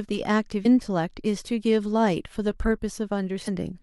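A brief glitch cuts through the speech from 0.62 to 0.66 s, and a second one, equally short at about 40 ms, lands from 3.44 to 3.48 s. Both come from damaged data in the compressed stream. A stretch of the encoded bytes was corrupted, so the decoder misread those frames, lost sync and produced garbage until it found the next valid frame header and resumed normal playback.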